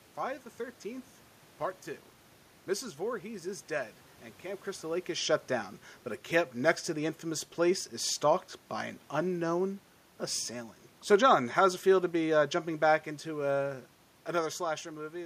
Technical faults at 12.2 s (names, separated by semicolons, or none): automatic gain falling